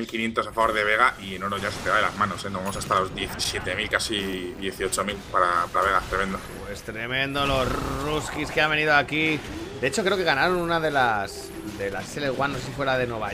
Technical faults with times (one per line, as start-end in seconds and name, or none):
none